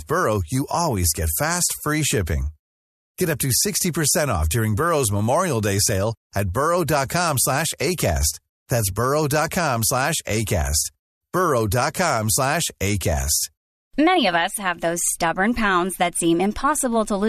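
No technical faults are audible in this speech.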